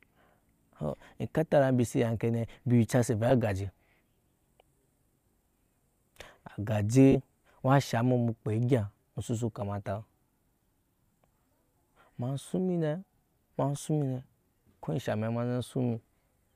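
Lost LE Audio frames at 3.30 s and from 7.12 to 7.16 s: the LC3 decoder covers each gap with a noisy copy of the previous spectrum, smearing the speech into brief hiss.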